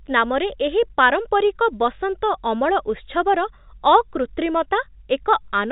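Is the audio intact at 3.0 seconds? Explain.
Yes, the speech at 3.0 seconds is intact, carried through G.711 telephone coding with its usual 4 kHz band limit and no fault at that moment.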